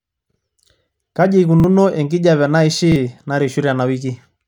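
Playback of this speech clip suffered a repeated buffer three times, at 0.32 s, 1.60 s and 2.92 s: fresh audio failed to reach the device in time, so it replayed the previous block once more. Each repeat lasts 40 ms, which fits a buffer of about that size, producing a brief stutter with an abrupt join on either side. Because the repeat fills the gap instead of the missing audio, roughly 40 ms of the speech is lost at each of these points.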